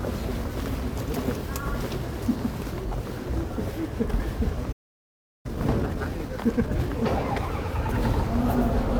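A recording of everyday sounds, with a playback stall from 4.72 to 5.46 s: the audio halts mid-flow and the output stays silent for about 0.72 s, likely because the player ran short of buffered data or its audio thread was held up. Unlike a brief dropout or a lost packet, this is a sustained, clean silence lasting a sizeable fraction of a second, after which the sound carries on from the point where it stopped rather than leaving a gap in the material. Straight after, from 5.46 to 6.90 s, comes time-compressed catch-up, as the player works off the backlog the stall built up by playing at 1.5 times normal speed. It trims small slices and cross-fades the joins, so the sound is hurried while its pitch stays where it was. That unchanged pitch is what separates it from a simple speed-up or a clock-rate error, which would raise the pitch along with the tempo.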